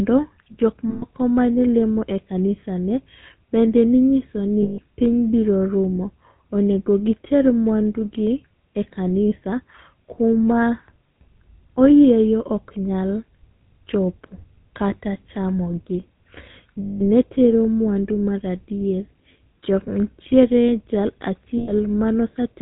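Speech carrying plainly audible GSM full-rate codec damage from start to finish, with a buzzy, gravelly texture that fits the 13 kbps full-rate coder. That codec models the vocal tract as a filter excited by a regular pulse train built from only a subset of samples. The coarse excitation produces the roughness, and the band stops at 4 kHz, leaving the sound dull and without sibilant detail. Lost GSM frames cause four short dropouts: 0.90 to 1.04 s (about 120 ms), 4.62 to 4.80 s (160 ms), 16.82 to 17.02 s (180 ms) and 21.58 to 21.72 s (100 ms). In each gap the decoder repeats the last good frame's parameters, so the sound hangs as a metallic, ringing smear instead of continuing naturally.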